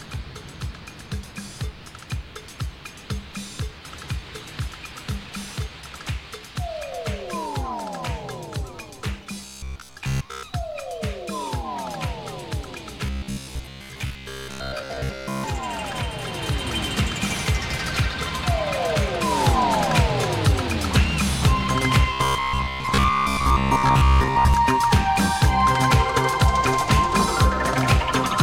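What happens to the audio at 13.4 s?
Robotic sound from repeated short buffers runs from 13.06 to 15.44 s. New audio likely arrives too seldom, so a fragment of about 15 ms is looped over most of that span, skipping the real signal and imposing a rigid, metallic 66.8 Hz buzz.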